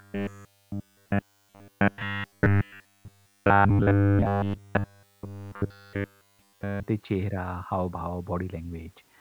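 From 0.01 s to 6.88 s the speech takes on a robotic sound from repeated short buffers, with a rigid, metallic buzz fixed at 100 Hz that only loosely tracks the talker's rhythm. The likely cause is audio arriving too seldom, so playback keeps looping a roughly 10 ms slice while the real signal is skipped, essentially throughout that span. Unlike codec warbling or a comb-filter tone, the buzz pitch stays locked regardless of what is said.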